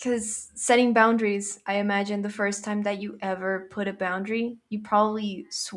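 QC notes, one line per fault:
No technical faults can be heard at any point in the speech signal.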